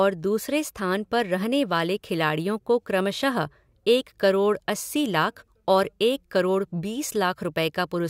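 No technical faults can be heard anywhere in the recording. Nothing in the audio calls for a timestamp or a fix.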